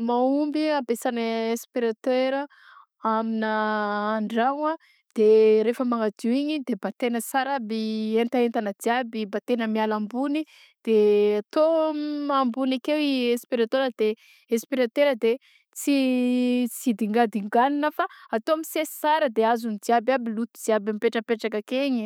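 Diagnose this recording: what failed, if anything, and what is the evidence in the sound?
Nothing failed: the speech carries no audible evidence of a fault at any stage of the chain.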